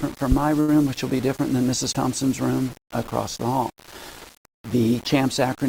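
From start to finish the audio carries a grainy, signal-following distortion, likely low bit depth without dither, with plain rounding to roughly 6 bits. The error sits only about 20 dB below the sound. Quiet passages turn gritty or sputter, and a waveform shows visible stair-steps.

At 0.60 s a short stall from a late packet holds the sound for about 79 ms, until 0.69 s. The receiver stretched what it had, then resumed with nothing lost. It is heard as a brief smeared hold with a faint buzz or dip, and a spectrogram shows flat, repeated bands there.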